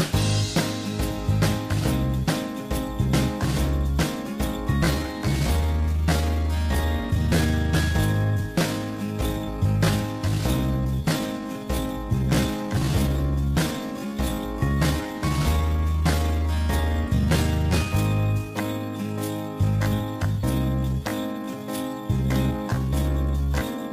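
From 4.79 s to the end, a time-stretched section plays at 0.69 times normal pace with unchanged pitch, likely from software repeating short pieces. It sounds dragging; the spectrogram shows elongated harmonics, the waveform stretched envelopes.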